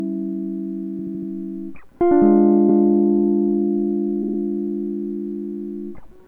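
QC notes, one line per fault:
0.98–1.30 s, 2.68–2.84 s, 4.22–4.38 s: repeated frames. Compressed blocks of music (78, 157, 52 ms) replay 4, 1 and 3 extra times, giving a stutter and identical waveform copies.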